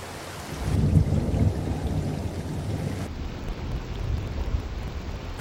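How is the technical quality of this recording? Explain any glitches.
Quality breaks down from 3.07 s to the end of the clip, where interleaved audio is read as planar. Each block holds alternating left and right samples, but the first half is taken as one channel and the second half as the other, so every half plays stretched to double length while the overall pace holds. The blocks here are 46.44 ms long, which fits a 2048-sample buffer, and that length gives a drop of an octave with a doubled, choppy texture stuttering at 21.5 Hz.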